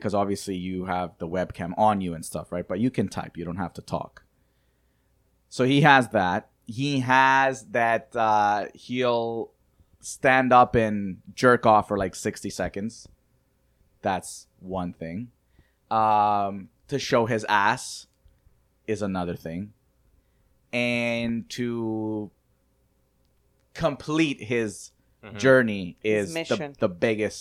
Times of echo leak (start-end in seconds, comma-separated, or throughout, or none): none